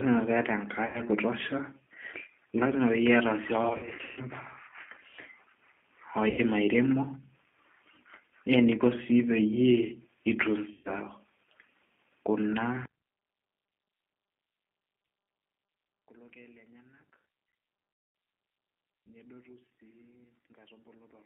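Throughout, the G.729 codec at 8 kbit/s confines the sound to about 200 Hz to 3.5 kHz and adds a rough, synthetic graininess. Simple band-limiting alone would leave a smooth, muffled sound, whereas this codec rebuilds speech from sparse pulses.

VoIP packet loss concealed by the speech codec occurs at 0.86 to 1.01 s, 3.69 to 4.21 s (scattered gaps, longest about 140 ms), 6.30 to 6.41 s, 10.73 to 10.91 s and 17.93 to 18.15 s. Each time the decoder stretches the last sound into a fading buzzy tone or coloured noise, not the abrupt silence of an unconcealed dropout.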